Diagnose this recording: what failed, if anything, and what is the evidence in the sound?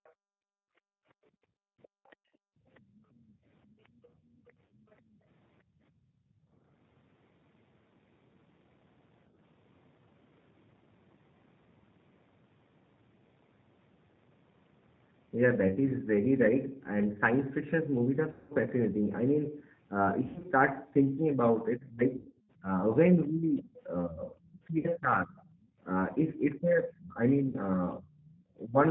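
Codec stage, G.729. The whole clip carries plainly audible G.729A coding at 8 kbit/s. Nothing reaches above 4 kHz, and the speech has the slightly rough, synthetic buzz of a codec that rebuilds each 10 ms frame from a vocal-tract filter, a pitch predictor and a handful of pulses. Simple narrowband filtering would dull the sound without this grainy, resynthesised texture, so the low-bitrate model itself is the cause.

Call processing, other side's voice leaking through. A faint second voice sits under the talker at 0.04 to 0.12 s, 1.83 to 4.95 s and 28.25 to 28.32 s, about 35 dB below the speech, and louder at 23.24 to 23.62 s, about 25 dB below. The likely cause is residual echo: the far end played on a loudspeaker and was not fully cancelled. Crosstalk on wiring would be steady, but these come and go in bursts.

Call processing, background gated by the echo canceller. The room sound is pulled down hard from 0.12 to 6.64 s, dropping by up to about 37 dB for most of that stretch. 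Shorter dips of about 15 dB occur at 25.67 to 25.78 s and 28.32 to 28.36 s. The long first dip overlaps the far-end leakage, and the last follows straight after it, which shows the canceller suppressing the microphone while the loudspeaker was active. A simple noise gate would key on the talker's own level instead.

Network, VoIP packet loss concealed by the speech codec. Losses occur at 4.66 to 4.74 s (40 ms), 15.68 to 15.74 s (20 ms), 18.32 to 18.53 s (180 ms), 20.28 to 20.48 s (120 ms scattered, longest run 80 ms), 22.17 to 22.51 s (260 ms scattered, longest run 100 ms), 24.78 to 24.88 s (60 ms) and 27.48 to 27.57 s (60 ms). The gaps come in multiples of 20 ms, which fits 20 ms packets. The decoder fills each gap by extrapolating from the last pitch and filter with fading gain, and the voice stays weak briefly afterwards. A storage dropout would produce hard silence instead.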